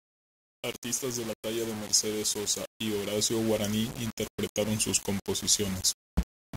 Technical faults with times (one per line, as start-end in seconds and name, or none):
0.00-6.56 low bit depth without dither